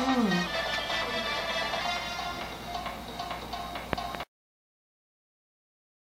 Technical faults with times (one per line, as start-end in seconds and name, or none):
0.46-1.81 drift correction step